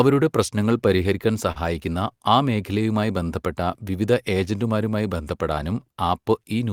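A speech recording whose sender clock runs slow against the receiver, by roughly 4 percent, so clock drift between sender and receiver keeps the jitter buffer draining throughout. The receiver compensates with repeated timing corrections from 0.14 s to 6.72 s, repeating short pieces, playing at 97 percent speed and adding roughly 200 ms. At 1.52 to 1.58 s, a short stall from a late packet leaves the buffer empty, so the last sound is held for 37 ms with nothing lost.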